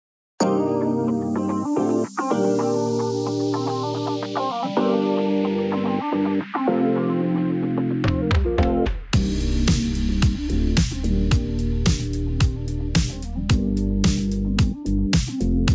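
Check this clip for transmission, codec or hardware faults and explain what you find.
No transmission, codec or hardware faults are audible here.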